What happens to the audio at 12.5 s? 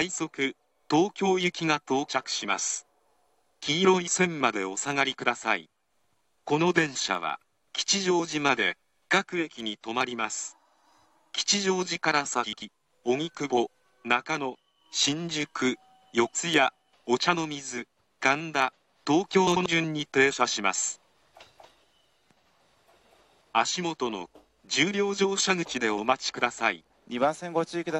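At 12.5 s there is a case of frames out of order, spanning 12.43 to 12.62 s. Two adjacent blocks of audio, each about 93 ms long, play in swapped order. The length of each block fits runs of four codec frames. The second block arrives first, then the first. The result is a brief garbled flutter. No time is lost, and the timing afterwards stays intact.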